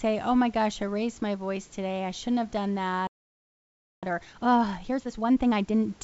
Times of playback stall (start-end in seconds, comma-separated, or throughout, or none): 3.07-4.03